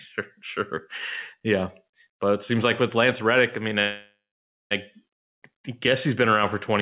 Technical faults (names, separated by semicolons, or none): call audio freeze